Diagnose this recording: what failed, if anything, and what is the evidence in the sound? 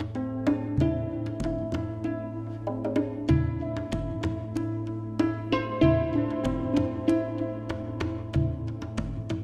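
Nothing failed: no stage in the chain, from analogue wiring to playback, leaves any audible fault anywhere in the recording.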